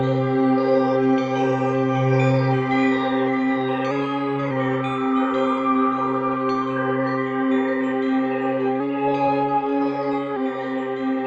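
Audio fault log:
Throughout: clock drift between sender and receiver. The sender's clock runs roughly 3 percent slow, so the receiver's buffer keeps draining and small timing hiccups recur unevenly.
0.10–10.85 s: repeated timing corrections. Short pieces are repeated to stretch playback to 97 percent speed, adding roughly 0.3 seconds.
3.91–4.51 s and 8.80–10.36 s: drift correction step. Speed jumps 5.88 percent and pitch about 99 cents, nearly a semitone, likely a one-step rate change to drain the buffer.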